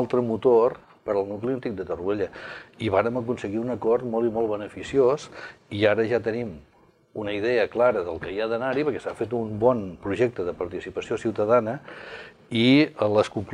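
Nothing goes wrong anywhere along the way here, so there's nothing to point to.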